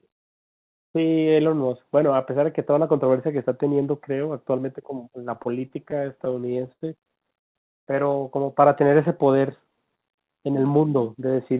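From 5.34 to 6.83 s the speech shows repeated stalls (stutter). Packets kept arriving too late, so the jitter buffer ran dry about sixteen times. Each hole was bridged by extending the last sound, adding 248 ms in total, with the longest at 80 ms. That fill covers 17% of the stretch. Nothing is lost, but the delivery drags and hiccups. On a spectrogram, the speech shows short horizontally smeared patches where harmonics freeze in place.

At 7.39 to 7.57 s comes a call audio freeze: 160 ms of silence inserted into the flow, after which the speech resumes where it stopped. The likely cause is packets being held up in transit and the jitter buffer emptying. On the waveform this is a flat gap. The spectrogram shows a blank vertical band.

From 8.61 to 10.73 s a jitter buffer slow-down stretches the audio to 89% speed, adding 243 ms. The receiver repeated single pitch periods and pause fragments to rebuild its reserve. 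Pitch stays unchanged, but sounds are drawn out. A spectrogram shows normal harmonic spacing with elongated syllables.

Overlapping this, between 8.78 and 9.31 s, scattered short gaps appear: roughly five tiny holes of a few milliseconds each, around 40 ms altogether. Each is patched by continuation and heard as a brief tick or smear. On the waveform these show as small discontinuities in an otherwise continuous envelope. Throughout, the call path's G.711 coding leaves nothing above 4 kHz on the spectrogram.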